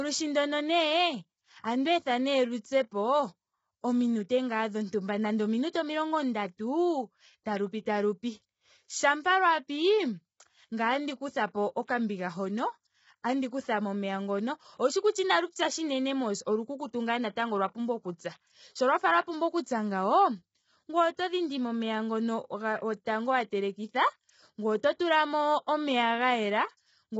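A speech recording, most likely passed through low-delay AAC compression of the AAC-ELD kind used in video calls, with its short frames starved of bits, a degree of damage that points to a rate near 16 kbps. The voice comes out rough and grainy, with noise filling the gaps between harmonics and nothing above 7.8 kHz. At 23.06 s there is a pre-echo: the codec's quantisation noise, spread across a block ending in a sharp attack, leaks about 13 ms ahead of it as a short hiss, and the onset sounds smeared.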